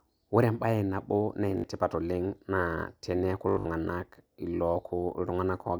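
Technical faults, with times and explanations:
1.58–1.64 s, Bluetooth stutter: the wireless link dropped or delayed about 61 ms of audio, roughly three packets' worth. The receiver replayed its last short slice until data returned, so the sound buzzes briefly, then jumps ahead as though it had kept playing.
3.49–3.65 s, Bluetooth stutter: a worse dropout lost about 142 ms, spread over 163 ms, with the longest gap about 81 ms. This fits seven or so missing packets. Repeated slices make a machine-gun stutter before the sound resumes further on.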